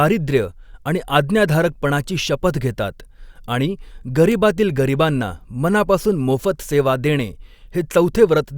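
At 4.32 s, between "आज्ञाधारकपणाची शपथ घेतात आणि" and "गरीबांना मनापासून मोफत सेवा'", a bit error spike: one flipped bit throws a single sample to about −8 dBFS before it snaps back. The result is one sharp, broadband tick with no relation to the speech around it.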